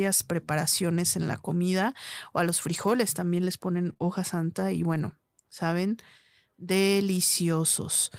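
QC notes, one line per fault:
2.69–2.91 s, 3.89 s, 4.02 s and 4.94–5.00 s, lost packet rebuilt from error correction: packets went missing, and the decoder played low-bitrate copies carried in the following packets, so there are no gaps. The longest stretch, about 120 ms, fits a run of roughly six 20 ms packets. These rebuilt frames sound rougher and noisier than the surrounding speech.
3.93–4.02 s, short concealed packet loss: two consecutive 20 ms chunks arrived too late, so the receiver extended the preceding sound for about 21 ms each and then blended back. Sandwiched between the rebuilt frames, this gives a brief smeared wobble.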